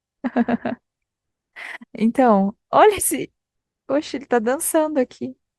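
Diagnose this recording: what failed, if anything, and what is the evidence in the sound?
Overlap between stream segments at 3.11 s: a tiny skip where the player trimmed about 10 ms of speech it wrongly treated as duplicated at a segment boundary.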